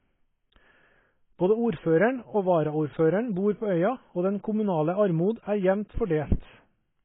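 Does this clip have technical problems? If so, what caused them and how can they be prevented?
Yes. Across the whole clip the speech is dull and smeared, with nothing above about 3.8 kHz and a warbling, fizzy texture on sustained sounds and sibilants. This is likely AAC compression at a very low bitrate, which fits a rate around 16 kbps: the AAC-LC encoder cuts the top band to save bits and coarsely quantises what remains, leaving gaps in the spectrum. Encoding at a higher bitrate, 64 kbps or more for speech, prevents it.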